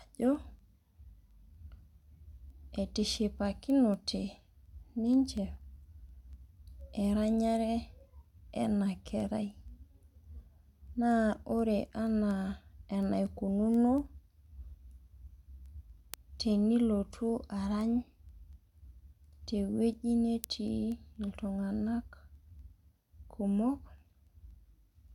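From 0.11 to 24.98 s, word clock ticks recur about every 0.2 s. An unlocked receiver clock, roughly 100 ppm off, drops or repeats one sample each time.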